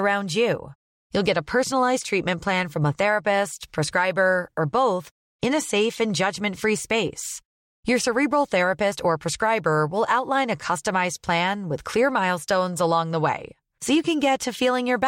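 Nothing stood out on listening to this speech recording.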